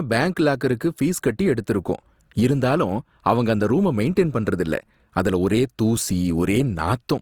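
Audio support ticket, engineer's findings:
Speech sounds grainy and rough for the whole clip, with a noisy, sandpapery coating on tones rather than swirly holes. Bandwidth still reaches full range, nothing past about 20.3 kHz. Likely Opus compression in its CELT music mode: band energies kept, starved bands refilled with folded or noise content. Fits a low bitrate, around 24 kbps.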